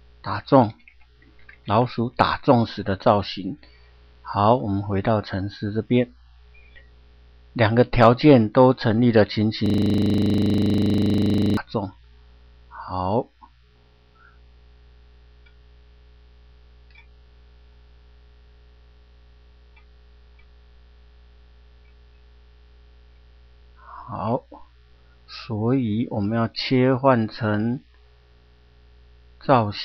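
At 9.66 s a system hang loop starts. The hardware replays one 40 ms buffer until 11.57 s, producing a rapid, buzzy 25 Hz stutter.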